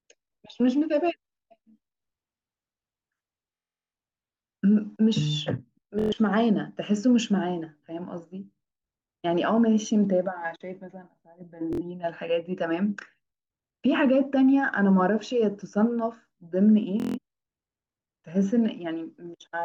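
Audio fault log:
3.55–3.93 s, 5.99–6.13 s, 11.73–11.82 s, 17.00–17.18 s, Bluetooth stutter: packets went missing, so the receiver looped its last short slice into a buzzy stutter, longest at 3.55 s, then the speech skips ahead.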